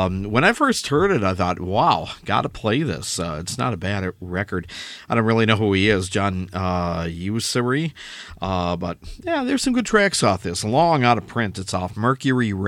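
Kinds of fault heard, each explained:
No technical fault is audible anywhere in this speech recording.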